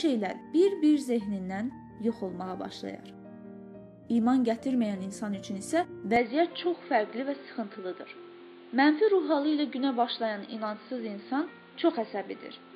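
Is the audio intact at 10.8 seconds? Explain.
No. From 6.16 s to the end, the recording likely switched its input to a poorer device. The narrower pickup leaves nothing above 4.8 kHz, so at 10.8 s the audio sounds dull and boxy, with a faint new background noise but no gap or level jump.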